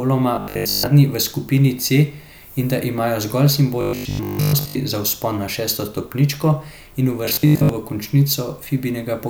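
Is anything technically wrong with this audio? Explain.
Yes. The speech shows robotic sound from repeated short buffers at 0.36–0.90 s (before "v skupini"), 3.81–4.75 s (after "in da imajo zgolj") and 7.25–7.69 s (after "na šesto stopničko in"). Audio likely arrived too seldom, so the software looped a roughly 20 ms slice and skipped most of the real signal, imposing a rigid, metallic 50 Hz buzz.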